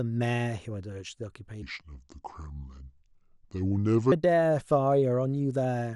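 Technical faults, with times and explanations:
1.62 to 4.12 s, section at the wrong speed: the speech in this stretch plays at 0.714 times its original rate, so it comes out slower and deeper, dropping by roughly five semitones before snapping back to normal pitch and pace at 4.12 s. Because speed and pitch shift together and abruptly at both boundaries, the section was likely resampled or played against a mismatched clock while the surrounding audio kept the correct one.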